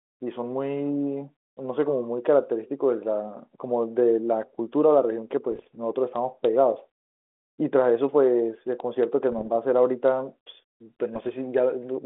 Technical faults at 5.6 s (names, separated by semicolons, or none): bit errors on an ADPCM link